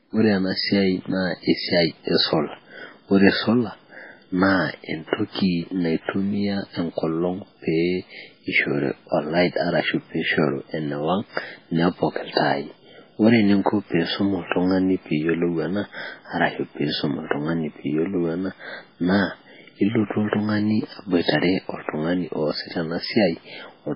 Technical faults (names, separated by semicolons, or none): MP3 compression